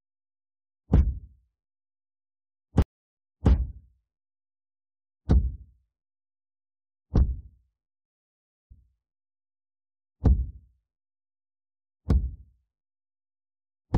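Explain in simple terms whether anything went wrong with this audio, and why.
A stream reconnect happens between 2.82 and 3.50 seconds. The connection carrying the audio dropped, so the player fell silent for about a third of a second (333 ms) while it reconnected and started decoding again from scratch. When the sound comes back, it picks up about 0.35 seconds earlier than where it stopped, because the server resent a short stretch it had already sent. You hear a gap, then a brief repeat.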